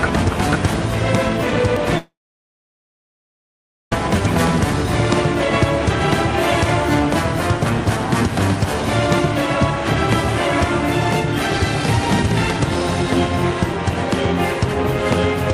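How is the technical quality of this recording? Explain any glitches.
The recording has one clear glitch. From 1.97 s to 3.92 s there is a long network dropout: the last sound smears into a brief fading buzz or hiss, then about 1.8 s of silence follows. Most likely the stream stopped arriving and the receiver briefly extended the final sound before giving up. Unlike a short packet-loss blip or a clean mute, there is that fading tail, and the audio resumes at 3.92 s with nearly two seconds simply missing rather than delayed.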